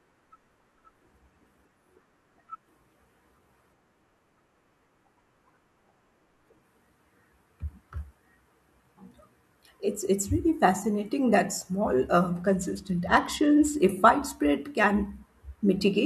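A Bluetooth SBC bit pool drop runs from 12.42 to 13.76 s, lasting about 1.3 s. The link appears congested, so the sending device cut the bits allotted to each SBC frame, which fits a fall from a bit pool near 28 to one near 12, around 96 kbps. Starved of bits, the highest sub-bands go nearly silent and the rest are quantised coarsely, so the speech turns dull and gritty until the rate recovers.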